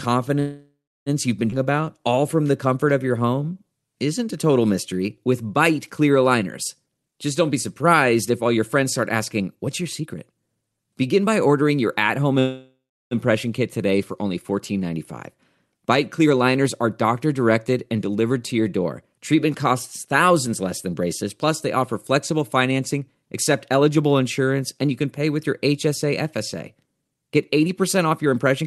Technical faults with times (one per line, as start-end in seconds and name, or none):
0.39-1.09 call audio freeze
1.50-1.54 skip ahead
1.58-3.65 jitter buffer slow-down
6.84-11.63 jitter buffer speed-up
12.39-13.14 call audio freeze
15.74-28.62 jitter buffer speed-up